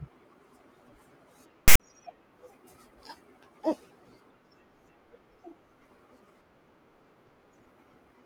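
At 1.68 s the speech is cut by a hard-edged burst of loud, lopsided rasp that ends in dead silence at 1.80 s. This is file tags played as audio: a block of text metadata and its zero padding was read as samples.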